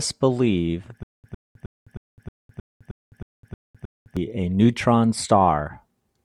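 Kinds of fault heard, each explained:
Stutter with silent gaps: From 1.03 s to 4.17 s the speech locks onto one 106 ms fragment, repeating it 10 times with 207 ms of dead digital silence after each, a steady stammer every 313 ms. The playback or stream likely stalled, and each retry replayed the last buffered piece before running dry again. Whatever speech belonged in those three seconds is lost.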